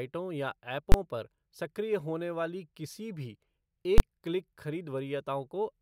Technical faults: invalid numbers at full scale

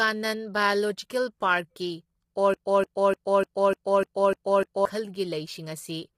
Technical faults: low-delay AAC compression; broken-record loop

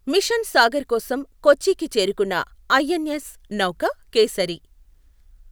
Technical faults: none

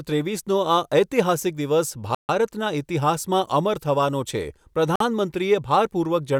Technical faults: Bluetooth stall

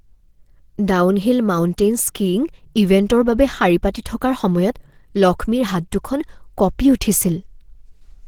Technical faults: Opus compression

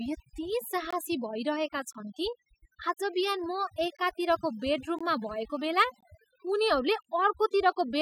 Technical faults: overdone noise removal; gap between chunks

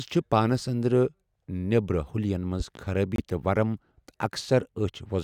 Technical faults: loud pop; corrupt frame muted

